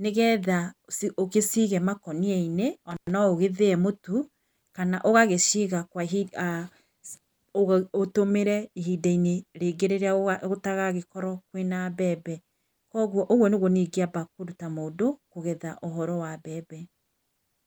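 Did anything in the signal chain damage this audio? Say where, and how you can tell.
Yes. At 2.91 to 3.11 s the speech is damaged in the analogue wiring by an intermittent contact: a loose plug or cable briefly losing connection. The signal drops out for about 107 ms, with crackle at the edges as the contact scrapes open and shut. A digital dropout or buffer underrun would fall to clean, abrupt silence. Here faint hiss stays through the gap, which points to a physical break in the line.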